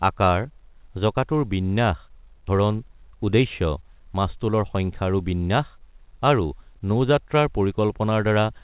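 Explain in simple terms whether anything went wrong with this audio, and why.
At 2.48 s, just after "আকাৰ জঁকাটোৰ বিন্যাস", there is a skip ahead: nearly half a second of speech was dropped, and playback jumps straight to later audio.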